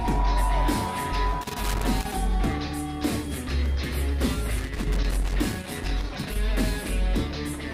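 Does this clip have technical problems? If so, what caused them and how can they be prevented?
Yes: loose connector crackle from 1.41 to 2.14 s and 4.56 to 6.36 s, a worn contact chopping the signal in irregular scratchy bursts, unlike evenly spaced digital clicks. Cleaning contacts and replacing worn cables or jacks prevents it.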